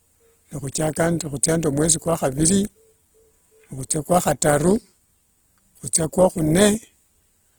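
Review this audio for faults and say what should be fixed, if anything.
Opus compression, throughout the clip: the speech has likely passed through an Opus encoder in its music (CELT) mode with too few bits, which fits a rate near 16 kbps. Starved of bits, the encoder keeps each band's overall energy but fills in the fine detail by folding lower bands upward or substituting noise. The voice therefore comes out plainly grainy and rough, with a noisy texture over its tonal parts rather than swirling gaps. The bandwidth stays full, with content reaching 20.2 kHz. To prevent it, encode speech at a higher Opus bitrate, or allow the encoder to switch to its speech mode when the rate must stay this low.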